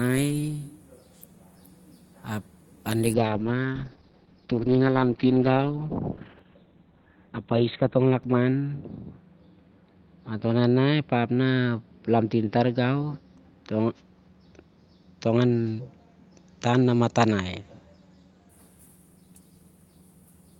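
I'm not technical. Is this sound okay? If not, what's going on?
No. From about 3.14 to 18.55 seconds there's a call bitrate drop. The connection got squeezed, so the call sent much less detail. The speech turns rough and muffled, with the crisp top end gone, and it's at its worst for about 4.6 seconds.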